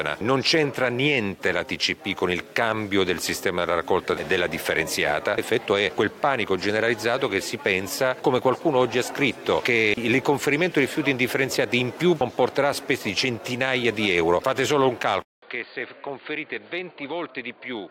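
At 15.22 s the sound cuts out for about 200 ms, then returns roughly 10 dB quieter, duller and boxier, with a narrower band and a faint new background noise, through to the end. This is likely an input switched to a poorer device.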